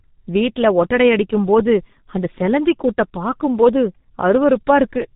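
A speech clip carrying heavy G.723.1 codec damage throughout: at about 6.3 kbit/s nothing passes above 3.8 kHz, leaving it muffled and hoarse with smeared consonants.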